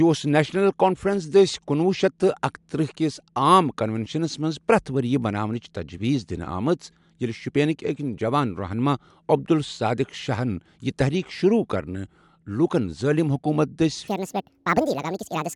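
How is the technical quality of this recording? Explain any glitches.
One glitch stands out, right at the end. From 14.08 s to 15.56 s, a section is at the wrong speed. It runs 1.67 times too fast, so the speech jumps about ten semitones higher and sounds hurried. Playback was likely set to the wrong clock.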